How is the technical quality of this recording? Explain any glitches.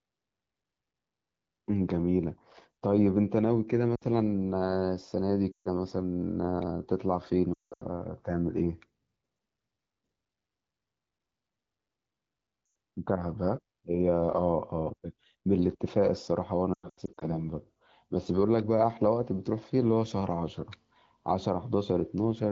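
The recording has one recurring glitch, lost AMR speech frames, at five points: 3.95–4.03 s, 5.52–5.68 s, 7.53–7.84 s, 12.65–12.75 s and 16.74–17.36 s. Radio errors corrupted speech frames, so the AMR-WB decoder discarded them and padded each gap by repeating the last good pitch and vocal tract settings at falling gain. The short losses, about 60 ms at 3.95 s and 100 ms at 12.65 s, drop the voice to near silence within two frames. The longer loss at 5.52 s, about 140 ms, likewise drops to near silence within two frames. The losses at 7.53 s and 16.74 s are scattered, with the longest runs about 180 ms and 100 ms. After each one the speech returns briefly weak or rough. Between the gaps the wideband codec's light coloration suggests a rate around 12.65 kbit/s.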